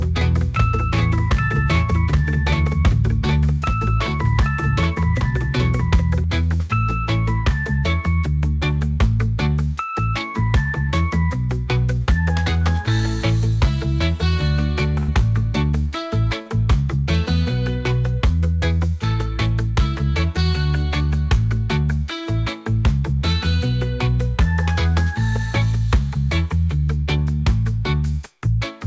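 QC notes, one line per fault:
0.00–6.24 s: doubled audio track. A second full-band copy of the sound runs about 0.7 s behind the first at roughly 5 dB lower. It is already present at the start and cuts off abruptly with no decay or room colour, likely from a slower second capture path.
15.00–15.10 s: burst of packet loss. About 80 ms of audio is missing. The receiver carries the last sound forward and fades it across the hole, then playback resumes further on with the intervening material gone, leaving an audible held-and-dropping patch.
16.42–16.48 s: short concealed packet loss. Roughly 40 ms failed to reach the decoder in time and was filled by extending the preceding sound, then blended back into the real signal. The result is a brief smear or wobble where that fragment is absent.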